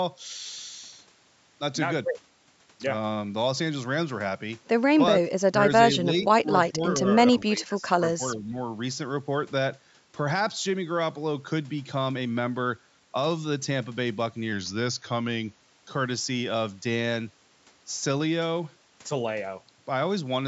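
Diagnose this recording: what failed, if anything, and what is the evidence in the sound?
Call processing: speech suppressed in double talk. The speech dips or breaks up at 5.22, 5.96, 6.42, 6.70, 6.99, 7.33 and 8.18 s, at worst by about 30 dB. The echo canceller likely ducked the near talker along with the echo.

Driver or buffer: a drift correction step. From 14.52 to 15.61 s, playback slows 5.4% and drops about 96 cents, nearly a semitone, then snaps back, likely as clock matching refills the buffer.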